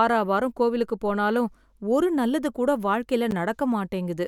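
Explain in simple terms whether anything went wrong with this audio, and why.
At 3.31 s, after "போனாலும் ஒரு நல்லது கூட", a gap between stream segments inserts about 11 ms of abrupt silence. Unlike a dropout, no sound goes missing.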